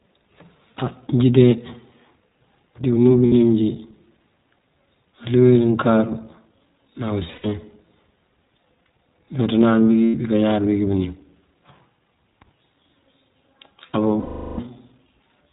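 Speech that sounds muffled, with nothing above 4 kHz, and slightly rough and synthetic throughout. This is the iLBC codec damage of a narrowband VoIP codec coding each short frame on its own, and the sound fits iLBC's 15.2 kbps mode with 20 ms frames. Lost iLBC frames turn the speech into a held, faintly buzzy, breathy vowel at 3.26–3.32 s, at 7.32–7.52 s where the dropouts are scattered and the longest lasts about a tenth of a second, at 10.04–10.15 s, and for a fading 0.4 s at 14.20–14.60 s. Missing packets make the decoder repeat the last pitch cycle with noise, and the speech recovers immediately afterwards.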